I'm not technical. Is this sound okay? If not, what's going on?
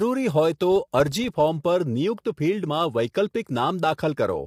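No. From 0.72 to 1.54 s there's a filter restarted on every block. A filter in the processing forgets its state every 40 ms and starts fresh, so each restart leaves a tiny tick, together a low buzz at 25 per second that gets louder as the voice does.

Throughout the clip the voice also sounds rough and grainy, with a hiss between its tones and a dull, artificial-sounding top end. That is likely low-delay AAC compression, the kind used on video calls, squeezed hard enough to be plainly audible.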